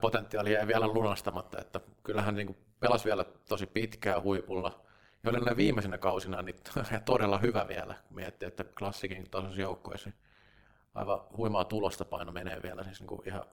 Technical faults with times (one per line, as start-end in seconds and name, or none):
0.00-13.53 overlap-add ripple